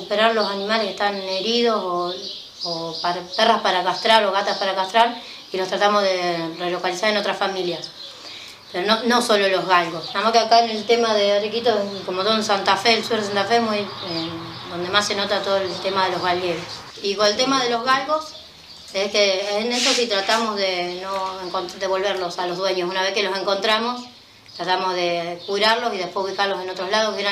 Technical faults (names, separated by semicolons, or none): none